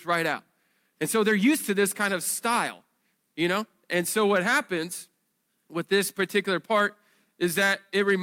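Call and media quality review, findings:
Nothing to flag on this speech recording; no audible faults anywhere, so no ticket items.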